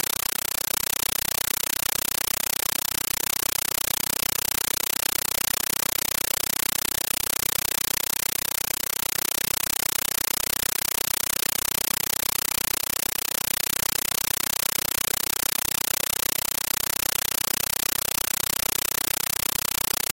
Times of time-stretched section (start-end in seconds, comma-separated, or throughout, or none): none